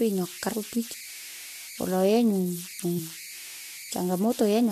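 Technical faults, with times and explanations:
Throughout: converter idle tones, a whistle near 2 kHz in pauses and grainy noise under quiet speech, about 15 dB below the signal, from undithered delta-sigma limit cycles.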